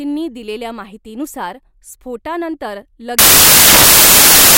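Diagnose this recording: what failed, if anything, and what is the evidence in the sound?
The failure is in sample-format conversion: from 3.19 s to the end, the speech collapses into loud, harsh broadband noise. That is samples built from the wrong bytes, with low-order bits read as high-order. Dropouts or clipping would leave the underlying sound recognisable.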